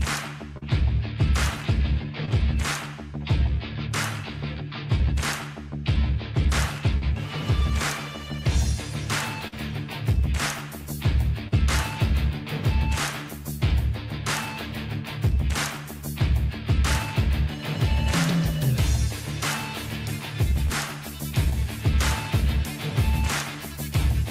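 Brief smears or wobbles at 0.57 to 0.63 s, 2.25 to 2.29 s and 6.97 to 7.03 s are short concealed packet loss. Each time, 20 to 40 ms of audio failed to arrive, and the receiver extended the preceding sound to cover the hole before blending back in.

At 9.47 to 9.54 s, a held buzz or fading hiss marks a burst of packet loss. Consecutive packets went missing, so the receiver stretched the last sound over about 47 ms, letting it decay, and then resumed with 40 ms of audio gone.

The same short concealed packet loss returns at 11.48 to 11.54 s and 20.66 to 20.72 s. Each is a momentary wobble where a gap of about 40 ms was filled by continuing the sound that came before it.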